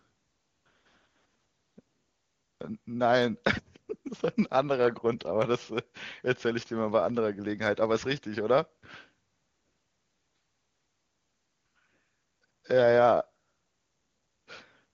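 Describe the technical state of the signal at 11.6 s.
At 11.6 s the speech is intact, with no fault present, and it is carried by the AMR wideband (HD Voice) codec at 23.85 kbit/s.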